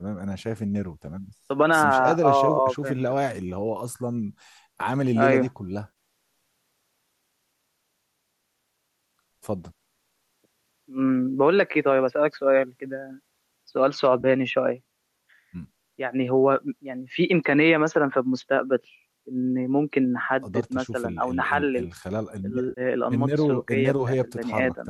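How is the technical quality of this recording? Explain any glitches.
The recording has three short dropouts, each a case of AAC frame loss with concealment. The underlying coding sounds like low-delay AAC, likely the AAC-ELD type used on calls, and it leaves only a light roughness.

The dropouts sit at 5.88–5.93 s, 14.21–14.26 s and 22.69–22.81 s. Frames went missing, and the decoder papered over them by reusing the last good spectrum, so each spot comes out as a brief smeared, noisy or phasey blur. The first and last fit about eight lost frames, and the middle one about three.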